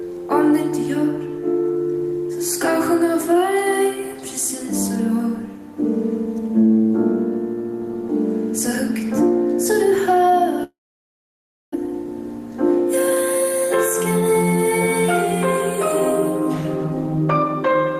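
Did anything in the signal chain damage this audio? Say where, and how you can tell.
Yes. The damage happens at the network stage. From 10.63 s to 11.76 s the sound stops. The last sound is briefly continued as a fading buzz or hiss, and then near-silence takes up almost a second. When the audio returns, it resumes further on, with roughly a second of material gone. This is likely a long network dropout: packets stopped arriving, concealment stretched the final fragment until it decayed, and the lost stretch was never played.

The receiver's buffer adds a second fault. Between 11.91 s and 13.62 s, just after the gap, the audio runs at about 103% speed with unchanged pitch. This is a jitter buffer speed-up. After the outage, delayed audio arrived in a burst and overfilled the buffer. The receiver then trimmed short pitch-period slices, some 70 ms in total, to pull the delay back toward its target.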